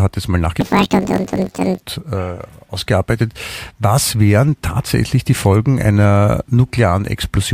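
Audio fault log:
0.61–1.83 s, planar audio read as interleaved, just after "hat jetzt mal". Each 21.77 ms block of left-then-right samples is read as alternating pairs. Each block plays twice at double speed. The speech jumps up an octave with a robotic buzz at 45.9 Hz.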